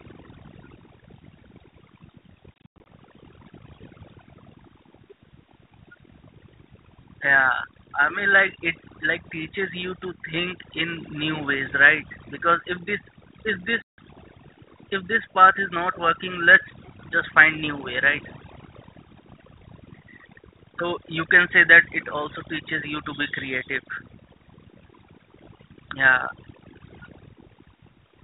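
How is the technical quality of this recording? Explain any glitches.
The quality is poor. The speech suffers from heavy processing, two dropouts and a brief echo. It also carries the band-limited, slightly grainy sound of a phone codec, which fits G.726 ADPCM at 32 kbit/s.

Overdone noise removal runs throughout. The noise reducer was set too aggressive. It pulls frequency bands near its noise estimate far down or shuts them off. Quiet parts of the voice vanish with the noise. The background sits in near silence with twinkling specks.

Packet loss on an ADPCM call happens twice. From 2.54 to 2.86 s, about 200 ms is missing, scattered over 320 ms, with the longest gap 100 ms. That fits roughly ten lost packets. From 13.82 to 14.01 s, 160 ms drops out. Each hole is silent and hard-edged. The decoder's predictor and step size then disagree with the sender's. So the speech returns with a click, a level jump or brief distortion, then settles.

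An echo leak appears at 16.83 s, lasting about 0.1 s. A very faint copy of the voice returns 349 ms late. The likely cause is a far-end loudspeaker whose echo canceller let some of its microphone pickup through, sending it back down the line.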